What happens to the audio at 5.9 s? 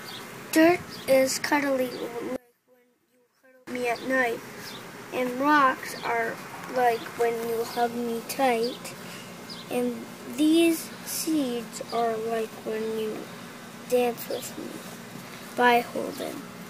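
Nothing goes wrong at 5.9 s; the audio plays through that moment intact, with no dropout, click or distortion.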